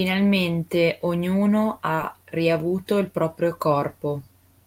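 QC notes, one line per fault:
1.95–1.99 s, short concealed packet loss: roughly 20 ms of the speech failed to reach the decoder in time, and the receiver synthesised about 19 ms to cover the gap by extending the preceding sound, carrying its pitch forward where it was voiced or substituting shaped noise where it was not, before cross-fading back into the received audio. The result is a brief smear or wobble at that point, where a short consonant may be lost.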